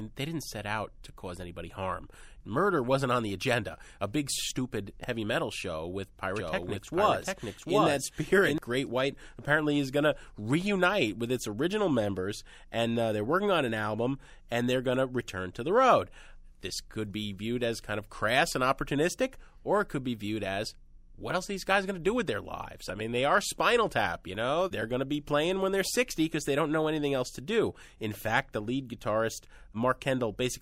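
From 6.36 to 8.58 s, just after "heavy metal show with", the speech is heard twice, a same-level copy trailing by about 0.7 s: a doubled audio track, likely from a second, slower capture path.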